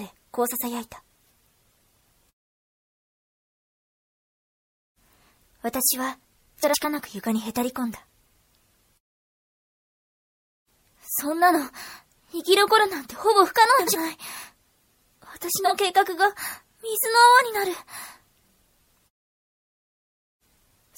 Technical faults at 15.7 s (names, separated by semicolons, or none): MP3 compression; frames out of order